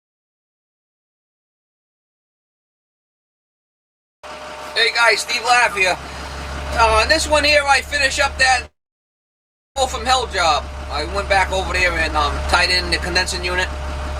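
From 8.65 to 9.78 s the sound cuts out: the last moment is drawn into a brief fading buzz, then about a second of silence, and the audio resumes with roughly 0.6 s skipped. This is likely a long network dropout, with the delay shifting by about half a second. From 11.37 to 12.24 s the audio runs hurried at about 139% speed with its pitch unchanged. This is a jitter buffer speed-up, trimming about 0.4 s of excess buffered audio by cutting out many short pitch-period slices.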